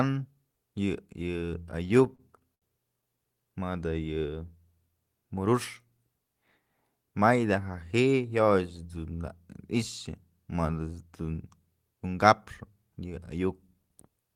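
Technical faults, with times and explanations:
1.83–2.64 s, repeated stalls (stutter): the speech catches eight times, the receiver stretching the last sound to cover 163 ms in all, the longest hold 72 ms. Packets arrived late, draining the jitter buffer repeatedly. Nothing drops out, but the passage drags.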